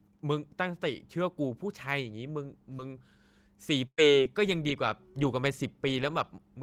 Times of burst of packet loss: 3.87-4.00

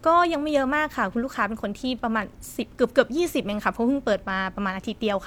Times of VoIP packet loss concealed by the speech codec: none

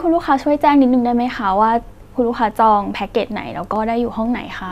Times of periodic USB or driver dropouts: 3.26-4.26

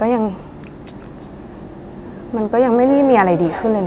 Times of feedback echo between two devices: 0.92-3.87

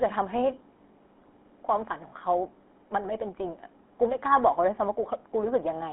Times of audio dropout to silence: none

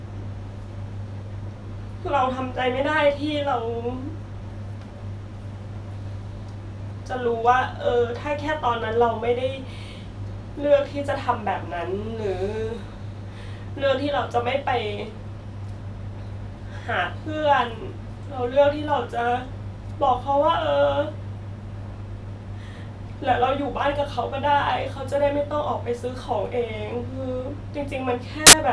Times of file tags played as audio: 28.47-28.53

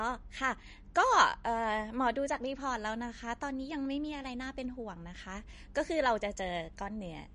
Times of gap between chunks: none

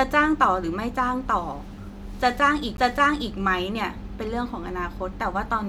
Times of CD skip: 2.77

